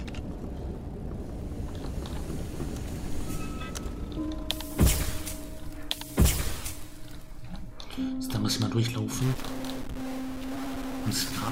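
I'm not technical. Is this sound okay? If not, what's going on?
No. From 9.22 s to the end, harsh buzzy grit appears and even quiet gaps fill with noise, likely a stuck bit; unlike clipping, it doesn't depend on loudness.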